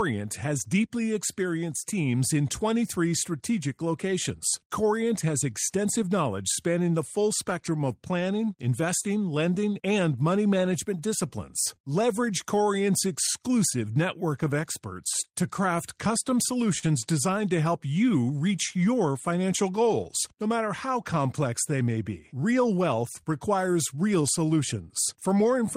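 Throughout this speech clip there is clock drift between sender and receiver: the sender's clock runs roughly three percent slow, so the receiver's jitter buffer keeps draining. On a waveform this shows as small, unevenly spaced seams rather than one obvious break, heard as recurring timing hiccups.

From 0.54 to 25.67 s, repeated timing corrections compensate by repeating short pieces, all in the same direction. Playback runs at 98% speed and adds about half a second overall. On a spectrogram, harmonic patterns briefly repeat at irregular intervals.

Between 4.24 and 7.85 s come scattered short gaps, about seven of them, each roughly 10 ms at most. The receiver covers each lost or late packet by continuing the last sound. These are heard as brief ticks. A spectrogram shows tiny smeared, flattened slivers.

From 11.76 to 13.29 s, about three more scattered short gaps occur, again up to roughly 10 ms, patched by extending the preceding sound. 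They are heard as isolated ticks. On a waveform, each shows as a few milliseconds of repeated cycles where the signal should change.

Between 15.78 and 23.63 s, about ten scattered short gaps appear. The longest is roughly 40 ms, enough to be heard as a short smear rather than a tick. On a spectrogram these show as horizontal smears where frequency content freezes briefly before the signal resumes.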